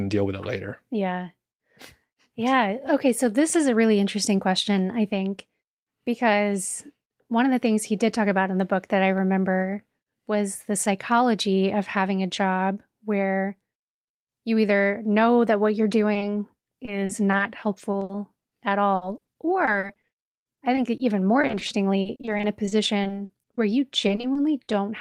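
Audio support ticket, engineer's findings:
Short concealed packet loss, 16.13–16.17 s and 16.19–16.23 s, right after "know that what you're": two 20 ms network dropouts, jitter buffer/decoder concealment extrapolated the last sound and crossfaded back. Audible as a quick double smear or wobble.

Repeated packet loss (robotic sound), five stretches: 16.85–17.41 s, 17.91–18.53 s, 18.95–21.01 s, 21.41–23.59 s, 24.07–24.69 s. Network path losing packets in bursts; each hole, up to 80 ms, patched by concealment, around a fifth of every stretch synthesized. Result: choppy, robotic sound with pieces missing.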